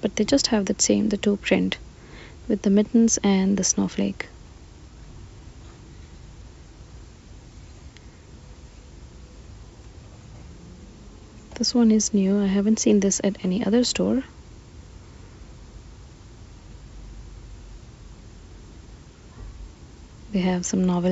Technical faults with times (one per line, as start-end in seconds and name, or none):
none